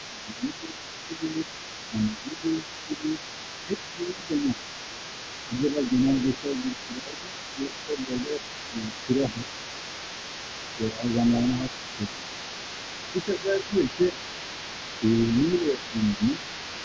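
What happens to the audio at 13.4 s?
The echo canceller likely could not separate the talker from the loudspeaker while both sides spoke, causing speech suppressed in double talk between 13.12 and 14.14 s. The voice dips by roughly 5 dB in brief patches totalling about a third of a second. Throughout the clip, residual echo likely lets the other side's voice leak through, audible at about 15 dB below the talker.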